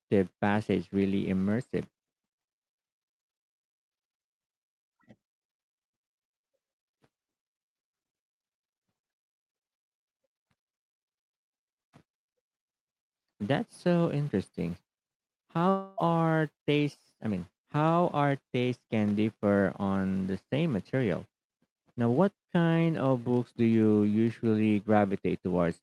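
From 15.69 to 15.99 s the speech breaks off for about 0.3 s, replaced by a buzzy, fading continuation of the last sound, likely from a long network dropout. On a spectrogram, under the Opus call path's 12 kHz ceiling, smeared, structureless energy fills the gap. The waveform shows a decaying envelope before speech resumes with that stretch missing.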